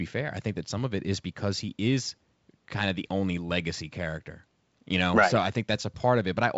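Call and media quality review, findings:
No faults found; G.722 wideband path at 64 kbit/s.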